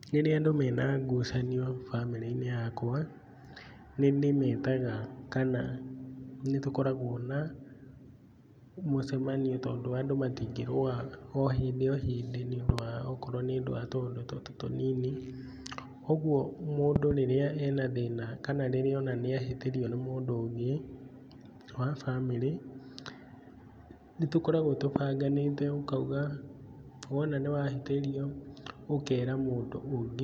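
Speech with five loud pops standing out, roughly 20 dB above it. Double pops fall at 12.69–12.81 s and 16.96–17.13 s, a single one at 24.96–24.98 s. Likely voltage spikes from a plug, switch or static.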